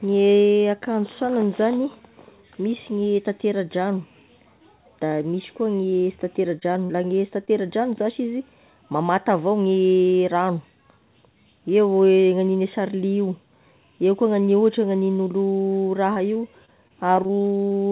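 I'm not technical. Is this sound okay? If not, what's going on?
No. There are two kinds of fault, both from the call connection losing bits of audio.

Short concealed packet loss happens five times, between 5.90 and 7.49 s: at 5.90–5.93, 6.60–6.78, 6.73–6.77, 6.85–6.91 and 7.45–7.49 s. Each time, about 20 ms of sound never arrived (40 ms at 6.85 s). The receiving end covered each hole by stretching the last bit of sound and then blending back in, so you hear a quick smear or wobble rather than silence.

Repeated packet loss (robotic sound) runs from 16.13 to 17.75 s. Here the dropouts keep coming, about a dozen small holes, the longest around 24 ms, covering roughly an eighth of that stretch. Each gap gets patched the same way, but the next one follows before the sound can settle, so this section turns choppy, with small pieces missing. Throughout, the sound has the narrow, telephone-like quality of a call line that carries nothing above 4 kHz.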